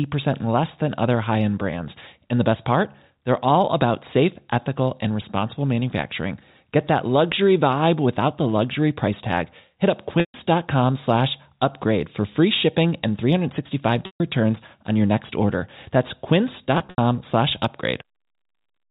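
At 10.20–10.34 s and 14.06–14.20 s, packet loss with pitch repetition drops about 140 ms of speech, which fits seven 20 ms packets. The last pitch period loops into a held, buzzy tone, fading toward silence. A spectrogram shows frozen, evenly spaced harmonics, and the waveform shows a repeating cycle shrinking in amplitude. At 16.78–16.98 s, 120 ms is lost in scattered gaps, the longest 80 ms, giving brief stuttering holds. Throughout, the G.711 telephone coding leaves nothing above 4 kHz.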